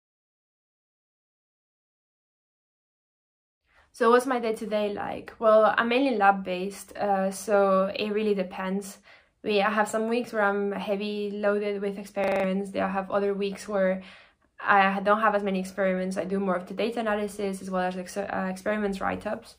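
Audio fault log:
12.24–12.44 s, system hang loop: a brief buzzing stutter as one 40 ms fragment repeats exactly five times, pulsing at 25 Hz. The system froze while the sound hardware kept cycling the same ring buffer, losing about a fifth of a second of audio.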